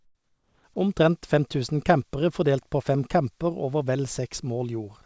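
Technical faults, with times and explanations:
0.00–0.64 s, comfort noise in place of the background: the opening is a smooth, even hiss with none of the texture of a real room behind it. It sits about 9 dB lower than the genuine background and well down, about 44 dB below the loud parts. The likely cause is discontinuous transmission. With no speech detected, the sender went quiet and the receiver filled the gap with synthetic noise roughly shaped like the background, on a call path whose 8 kHz ceiling fits G.722.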